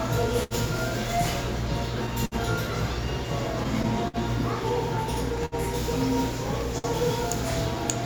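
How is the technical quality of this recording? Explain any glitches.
The recording has timing faults from start to finish, plus a run of brief holds.

Clock drift between sender and receiver affects the whole clip. The sending clock runs roughly 4 percent slow. The receiver's buffer keeps draining, so it patches the gaps by repeating tiny slices. Small, uneven timing hiccups result.

Short stalls from a late packet occur at 0.43 to 0.54 s, 2.25 to 2.35 s, 5.45 to 5.55 s and 6.78 to 6.87 s. Each time, a packet arrived late and the buffer ran dry. The last sound was stretched by 59 to 72 ms, then playback resumed. You hear a brief hold with a slight dip.

Repeated stalls (stutter) occur from 3.64 to 4.16 s. The buffer ran empty three times. About 78 ms was filled in, with the longest gap 57 ms. Nothing is lost, but the sound drags and stutters.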